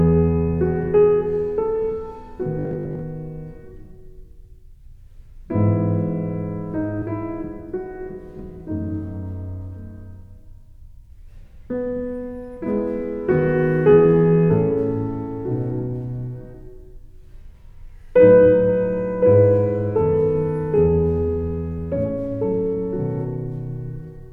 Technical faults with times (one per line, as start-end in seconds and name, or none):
2.59-3.01 robotic sound from repeated short buffers